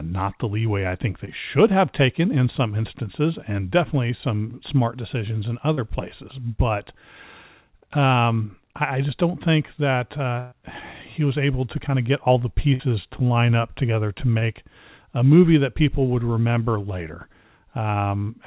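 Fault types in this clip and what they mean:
Short concealed packet loss: about 30 ms of the speech never arrived, and the receiver bridged each gap by extending the preceding sound before blending back, heard as a brief smear or wobble at 1.25, 5.74 (after "some smart decisions in") and 14.38 s, shorter and less obviously missing than a burst.
Burst of packet loss: a longer run of lost audio, 60 ms at 12.74 s between "of get all the" and "to line up together" and 120 ms at 10.39 s, filled with a stretched, fading continuation, so a piece of speech is audibly skipped rather than merely smeared.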